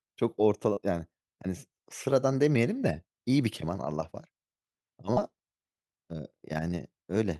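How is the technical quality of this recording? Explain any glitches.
Two brief dropouts interrupt the speech. Short concealed packet loss occurs at 0.73 to 0.78 s and at 5.14 to 5.18 s, where about 30 ms of audio arrived too late to decode. The receiver extended the preceding sound to fill each gap before blending back, leaving a brief smear or wobble.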